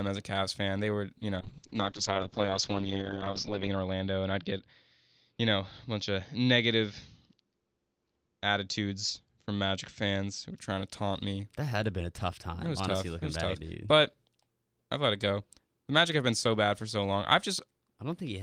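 After "were you", 1.43 to 10.63 s, a call bitrate drop starves the encoder, so the speech turns rough and muffled, capped near 8 kHz, until "to taunt me".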